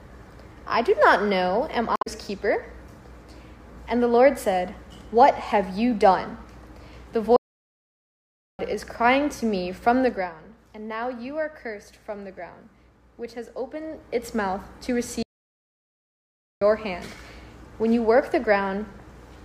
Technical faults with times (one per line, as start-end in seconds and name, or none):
1.93-2.07 damaged data in a compressed stream
7.36-8.59 playback stall
10.02-10.36 zipper noise
15.23-16.62 playback stall